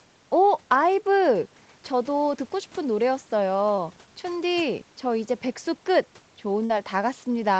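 At 3.76 s and again from 6.65 to 6.70 s, the speech shows short concealed packet loss. About 10 ms of audio, then about 40 ms, never reached the decoder in time. The receiver filled each hole by extending the preceding sound, pitch-continued where voiced and as shaped noise where not, before crossfading back. The first gap is a very brief smear. The second is long enough to be heard as a brief smear or wobble in the speech.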